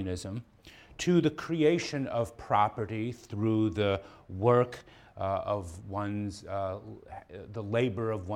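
A drift correction step, likely from clock-matching software, raises playback speed 5.4% from 4.30 to 5.11 s, sharpening pitch by 91 cents before snapping back.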